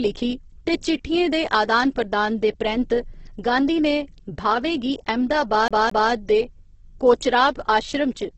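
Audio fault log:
throughout: Opus compression. Grainy and rough, with nothing above 8.2 kHz, so it sounds muffled. This likely comes from Opus in its CELT music mode starved of bits, which fits a rate near 12 kbps, filling thin bands with noise instead of detail.
5.68 to 6.12 s: CD stuck on one turn. The same 0.22 s stretch plays twice more in a fast, even stutter, each repeat cut with a brief mute, as if a scratch kept throwing the laser back one track at the same point.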